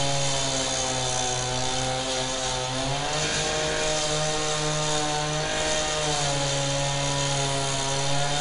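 From start to finish the audio carries 4-bit ADPCM compression damage. Each sample is coded as a coarse 4-bit step from a predicted value, and the step size adapts only gradually. The result is a plainly audible gritty hiss that rises and falls with the level, plus roughness on sharp attacks where the steps cannot keep up. The band stops at about 10.6 kHz, which fits a bitrate of around 88 kbps. On a spectrogram the noise appears as a broadband haze tracking loud moments, cut by a flat ceiling near 10.6 kHz.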